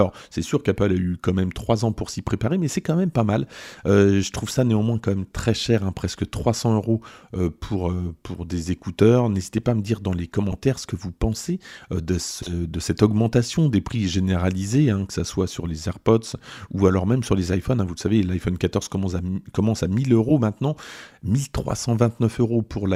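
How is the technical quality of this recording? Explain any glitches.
The recording has four short frames-out-of-order glitches, at 10.51 to 10.55 s, 12.38 to 12.51 s, 20.29 to 20.31 s and 21.69 to 21.72 s. Adjacent blocks of 10 to 40 ms play swapped, producing brief garbled flutters.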